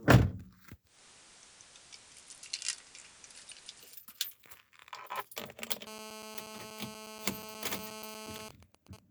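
Digital radio blending to analogue runs from 0.84 s to 4.01 s. The receiver lost its digital stream and cross-faded, over about 219 ms, to the FM broadcast of the same station, then returned. The level shifts by about 3 dB, and a bed of hiss rises to roughly 25 dB below the sound.

GSM phone buzz follows from 5.87 s to 8.46 s. A 2G handset nearby is on a call, pulsing its transmitter 217 times a second. The audio circuitry rectifies those radio bursts into an audible signal. The result is a hard, raspy 217 Hz buzz dense with harmonics, unrelated to the sound itself, nearly steady at about 11 dB below it.

GSM signalling bursts take over from 8.46 s to 8.99 s. A 2G phone nearby is in a call, but its user has gone silent, so it sends only sparse groups of bursts at the 217 Hz rate. Once rectified, these come through as even ticks with a longer buzz twice a second, sitting around 15 dB under the sound.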